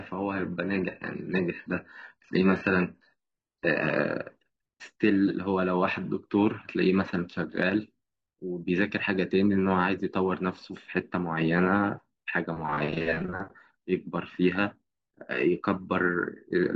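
Speech that opens as an adaptive stream starting at a low bitrate: until 4.0 s the treble sounds synthetic and smeared, which fits HE-AAC at about 12 kbit/s, then it jumps to clean highs, like AAC-LC at 96 kbit/s. The switch comes with no gap or dropout, so a connection fault is unlikely.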